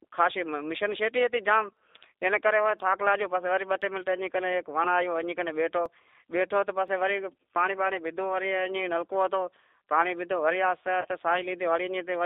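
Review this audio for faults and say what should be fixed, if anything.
Running through the whole thing is the G.729 codec at 8 kbit/s, with the speech squeezed into a line band of about 300 Hz to 3.7 kHz. The damage is plainly audible: a rough, slightly synthetic edge, because the decoder rebuilds each 10 ms frame from a filter, a pitch predictor and a few pulses. Switching that link to a wideband codec would fix it.

From 1.77 s to 6.88 s there are periodic USB or driver dropouts, about seven small ticks spaced every 1.02 s. Each one skips roughly 4 ms of audio outright, so the sound jumps forward rather than going silent. That regular spacing points to some background task stalling the bus or driver on a timer. Tracking down that task, or giving the audio path a bigger buffer, should stop them.

Around 11.01 to 11.06 s there's VoIP packet loss concealed by the speech codec. About 30 ms went missing, which fits a single lost packet. 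The decoder filled the gap by extrapolating from its last pitch and filter, so you hear a short, fading smear instead of a clean continuation. A steadier network path, forward error correction or a better jitter buffer would prevent it.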